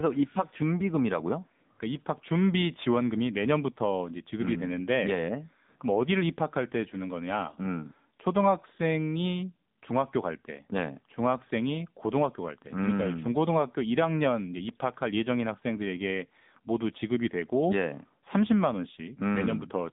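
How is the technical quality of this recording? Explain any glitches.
Technical quality is limited by narrowband mobile coding throughout. AMR narrowband mobile codec damage runs the full length: the speech sits between 150 Hz and 3.7 kHz, and the codec models it from a few pulses per frame, leaving a plainly buzzy, synthetic edge that fits a low mode near 8 kbps. A spectrogram would show a hard ceiling at 3.7 kHz with nothing above.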